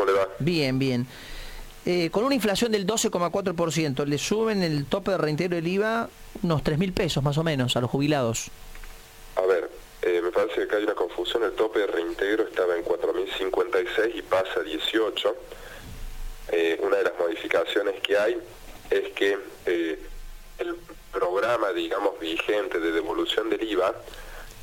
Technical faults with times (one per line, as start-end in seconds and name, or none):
19.75-21.48 channel delay (comb filtering)